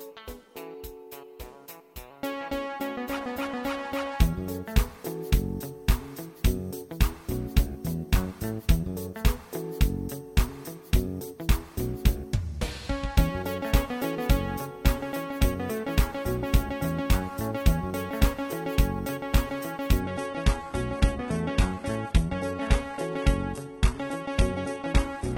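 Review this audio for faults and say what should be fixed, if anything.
At 20.00 s the audio switches, with no gap, to an adaptive stream at a lower bitrate, and stays there to 25.38 s. The connection slowed, so the player fetched a leaner encode. The sound fits a drop from about 96 kbit/s AAC-LC to 16 kbit/s HE-AAC. Treble turns thin, with nothing above 11.8 kHz. On a spectrogram the upper band ends abruptly at 20.00 s under a flat ceiling, while the waveform continues unbroken. Prevent it by buffering further ahead or pinning a minimum rendition for capture.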